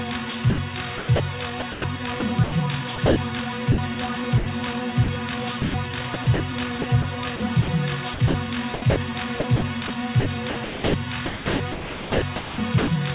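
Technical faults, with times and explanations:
0.5 to 3.16 s, sound chopped by the voice detector: the sound keeps cutting in and out, with about 580 ms in total swapped for comfort noise. That's likely the sender's detector flipping between sending and not sending on the quieter bits, so edges and soft passages get clipped off.
3.72, 4.38 and 5.04 s, sound dropped by the voice detector: three short holes of about 60, 80 and 40 ms where the sound briefly gives way to steady, even noise and then snaps back. It's likely the detector took a quiet moment for background and stopped sending, and the receiver filled the gap with comfort noise until sending resumed.
5.62 to 12.88 s, sound chopped by the voice detector: a much longer choppy stretch, with about 2.3 s of the 7.3 s span replaced by comfort noise. It gets a gated, stuttering feel. This is likely the same detector toggling repeatedly, on a G.711 call path that carries nothing above 4 kHz.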